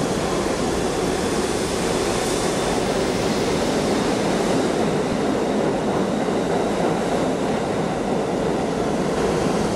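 Audio with damaged data in a compressed stream: brief glitches at 0.72, 2.86, 5.13 to 5.18 and 9.17 s, as the decoder loses sync and resyncs.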